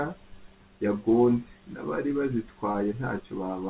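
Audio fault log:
2.72–2.76 s, short concealed packet loss: roughly 20 ms of call audio arrived too late, so the decoder stretched the preceding speech, leaving a brief smear.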